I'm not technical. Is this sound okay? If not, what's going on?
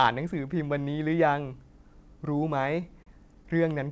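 No. Between 2.62 and 3.46 s the speech has repeated stalls (stutter). Six times, the sound briefly hangs, holding onto the last bit for at most 38 ms before moving on, because the audio arrived over the call connection a little too slowly to keep up. Unlike dropouts, where pieces vanish, nothing is actually lost here; the speech just drags and hiccups. The call itself carries nothing above 8 kHz, so the very top is trimmed.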